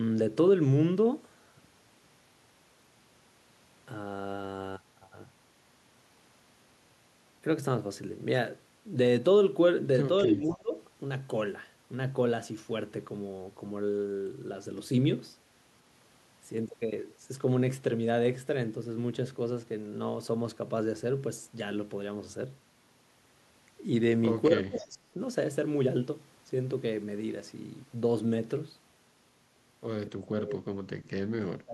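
At 10.26 to 10.74 s the speech sinks abruptly, dropping by something like 25 dB for about half a second before recovering. This is speech suppressed in double talk, likely caused by the echo canceller mistaking the talker for loudspeaker echo while the far side spoke, and pulling both down together. The same dip returns at 24.48 to 25.19 s, deeper at around 30 dB and lasting close to three quarters of a second. Inside that gap, at 24.76 to 24.84 s, a faint, brief scrap of the voice comes back 247 ms late, roughly 20 dB under the speech. This is an echo leak, likely from a loudspeaker on one side whose echo canceller let part of its microphone pickup through and return it down the line. Speech suppressed in double talk strikes again at 30.07 to 30.75 s, again around 30 dB down, and at 31.38 s through the end of the clip, about 25 dB down, likely from the same overlapping talk triggering the canceller.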